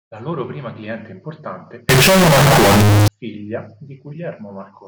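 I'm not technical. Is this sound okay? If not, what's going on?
No. From 1.89 to 3.08 s, right after "loro prima cliente importante", the speech turns very loud and harsh, and background noise gets as loud as the voice, though the pitch still comes through. This is likely float read as integer: audio saved as decimal numbers was read back as whole numbers, making the sound blocky and loud.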